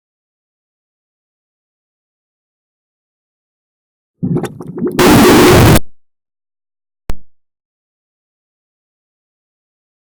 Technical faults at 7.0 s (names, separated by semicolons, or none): signed and unsigned mixed up